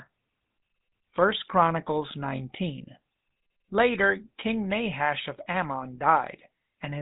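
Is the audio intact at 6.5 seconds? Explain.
No. At 6.5 seconds, as across the whole clip, the speech carries GSM full-rate codec damage, plainly audible and consistent with a 13 kbps coder. The codec rebuilds the voice from a vocal-tract model driven by a sparse, regularly spaced pulse excitation, which gives it a buzzy, gravelly roughness, and nothing survives above 3.8 kHz. A simple band-limit would only sound muffled. The grainy buzz is what marks this as the GSM codec.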